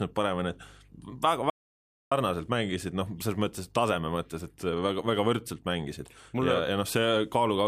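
At 1.50 s the speech stops dead and nothing returns until about 2.12 s, an audio dropout to silence lasting roughly 615 ms. The gap is silent, without even room tone, so the cut and the re-entry both land mid-flow and whatever was spoken in between is lost. The likely cause is a brief loss of input, such as a disconnect or mute, while recording continued. A waveform shows a flat line; a spectrogram shows a clean black band across all frequencies.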